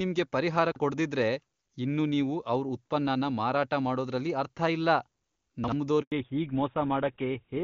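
At 0.72 s and again at 5.64 s, there are chunks out of order. Each spans 0.08 s. A 40 ms piece of audio plays one slot late, after the piece that should follow it. Nothing is lost, but the order is wrong. Each spot sounds like a brief jumbled stutter.

At 6.02 s there is a handover gap. The call switches networks, and no speech arrives for 100 ms. The sound fades out quickly and stays silent until the new link starts at 6.12 s. Whatever was said in that window is gone.

From 6.12 s to the end, there is a fallback to narrowband. Before this, the clear HD Voice wideband sound is audible. After it, nothing above 4 kHz remains, which fits a switch to an older narrowband codec. The speech turns duller and rougher.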